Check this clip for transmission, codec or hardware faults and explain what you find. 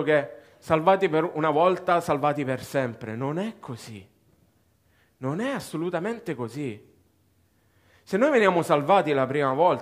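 Nothing turned up on this one: the speech comes through with no transmission, codec or hardware trouble to point to.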